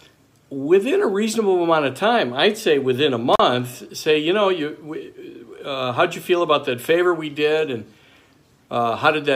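At 3.33 s the audio drops out through an intermittent contact, a loose plug or cable connection that briefly opens the signal path, and recovers by 3.40 s. The line stays open for about 40 ms, leaving only faint hiss, with a short crackle as the contact breaks and again as it remakes. On a waveform this appears as a sudden collapse to near-silence framed by sharp spikes; a spectrogram shows a thin gap bounded by broadband vertical streaks.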